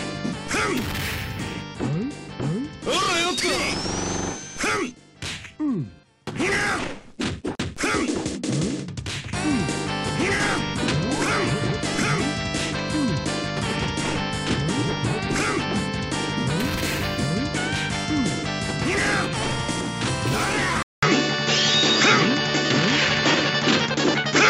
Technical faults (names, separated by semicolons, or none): input switched to a poorer device